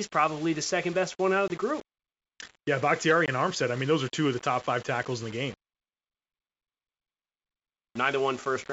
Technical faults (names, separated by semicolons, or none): low bit depth without dither; packet loss on an ADPCM call